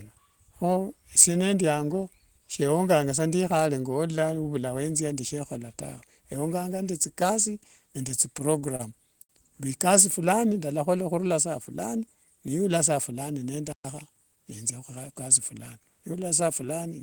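From 8.09 to 8.81 s the speech stutters with repeated stalls. The jitter buffer ran dry five times as packets arrived late, and each gap of up to 31 ms was bridged by extending the last sound, about 76 ms in all. Nothing is lost, but the flow drags unevenly. The string of small hitches is what separates this from a single late packet.

At 9.23 s there is one short stall from a late packet. The arrival delay jumped by 62 ms, so the receiver held the current sound for 62 ms until the data caught up, then resumed from the same point. It sounds like one syllable smeared too long with a faint buzz, with no gap and no skip.

At 13.73 s the audio drops out completely for 120 ms before continuing. Unlike the two earlier events, nothing fills the break with stretched sound; it is a hard silence. That points to a playback stall, likely caused by the player running out of data or its output thread being blocked, not to network delay covered by concealment.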